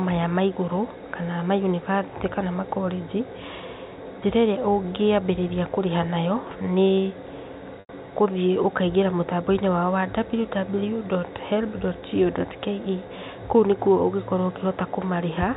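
At 7.8 to 7.89 s, packet loss with pitch repetition leaves a 90 ms gap, which fits three lost 30 ms packets. The receiver loops the last pitch period, so the sound briefly holds as a buzzy tone before fading. On a spectrogram, frozen harmonic lines flatten into a short, dimming band, and the waveform shows identical repeating cycles shrinking in amplitude before the sound resumes. The G.711 telephone band above it stays capped at 4 kHz.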